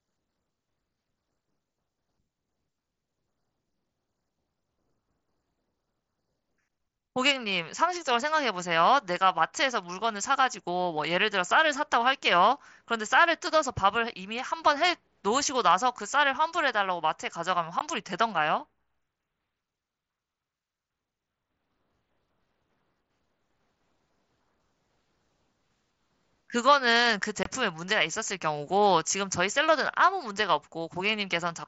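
Unconcealed Bluetooth headset packet loss at 17.79 s and 27.43–27.46 s punches hard-edged silent holes of about 15 ms and 22.5 ms into this speech, where headset voice packets never arrived and nothing filled them, all carried over mSBC wideband audio.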